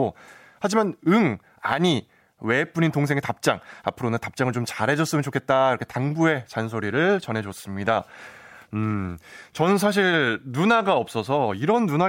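No technical faults can be heard in this recording.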